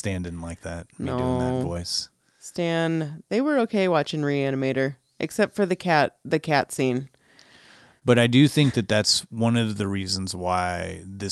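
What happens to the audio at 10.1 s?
At 10.1 s the sound sits inside a run of repeated timing corrections lasting from 9.28 to 11.11 s. The receiver keeps repeating short slices to stretch the audio, adding roughly 50 ms in total at 98% speed. The edits are small and, if heard at all, come across as faint hiccups and a slightly dragging, uneven tempo.

The cause is clock drift between sender and receiver, present throughout the clip. The sender's clock runs about one and a half percent slow, so the jitter buffer keeps draining. The receiver must pad the audio with repeated pieces, producing these small, irregular stumbles.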